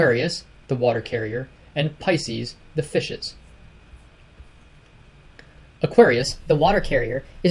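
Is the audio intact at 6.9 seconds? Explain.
No. At 6.9 seconds the sound is running fast and slightly high, about 1.09 times normal speed and about 1.5 semitones sharp, from 6.22 s through to the end of the clip at 7.51 s. This is a wrong sample rate fault. The samples are being played back faster than they were captured, with no rate conversion, which fits audio recorded at 22 kHz being played at 24 kHz, so tempo and pitch rise together by that same ratio.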